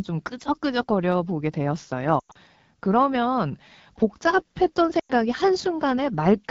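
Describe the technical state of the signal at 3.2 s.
At 3.2 s the speech carries AMR wideband (HD Voice) codec damage throughout. Its low-rate model, at 8.85 kbit/s, synthesises speech from sparse pulses, leaving a plainly rough, raspy quality.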